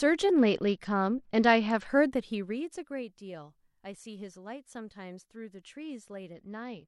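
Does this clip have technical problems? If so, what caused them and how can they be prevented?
Yes. A Bluetooth SBC bit pool drop appears twice, from 0.31 to 1.87 s and from 6.33 s to the end. In both spans the treble goes dull and a gritty noise rises. The link was likely congested, so the sender cut its bit allocation. That fits a fall from bit pool 31 to 9, near 72 kbps. The top sub-bands then lose their bits. The rest are quantised coarsely. Keeping the phone close to the receiver, away from Wi-Fi and other 2.4 GHz traffic, or using a wired connection prevents this.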